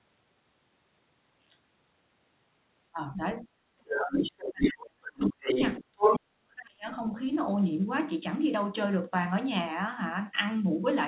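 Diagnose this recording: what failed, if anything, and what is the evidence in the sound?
Speech suppressed in double talk, in the call processing: the talker's speech dips briefly at 2.93, 3.16 and 3.42 s (about 5 to 10 dB), then nearly vanishes at 3.73–4.32, 4.49–5.49 and 6.1–6.87 s (about 35 to 40 dB down). That's likely the echo canceller ducking everything while both ends talked.

The other side's voice is leaking through, same stage: a second voice comes up at 3.92–4.72 s at about the talker's level, and again at 5.2–6.19 s about 5 dB above it. It's likely loudspeaker echo the canceller didn't fully remove, overlapping those suppression gaps.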